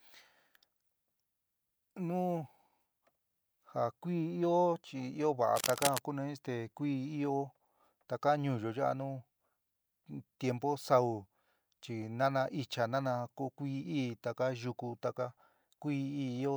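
At 5.55 s a burst of cable scratch noise begins. It lasts until 5.99 s. Dense, uneven crackling rustles over the speech, only slightly quieter than it. The likely cause is a worn cable or connector being moved. Its contact resistance jumps rapidly.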